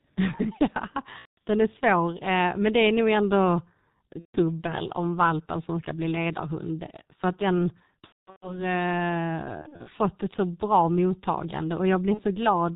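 The whole clip runs through the G.723.1 codec at about 6.3 kbit/s: nothing above 4 kHz, so speech sounds muffled and hoarse with smeared consonants. VoIP packet loss concealed by the speech codec hits at 1.19 s, at 4.19 s (after "det är nog ändå"), at 8.02 s (after "att den", the longest, with gaps scattered over about 0.4 s), at 9.62 s (just before "fått ett så bra"), and at 12.14 s. Each time the decoder stretches the last bit of sound into a fading buzzy tone or coloured noise while it recovers.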